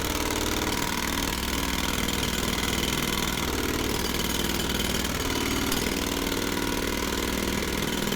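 Nothing here calls for comment: the sound runs along without any technical trouble to point out.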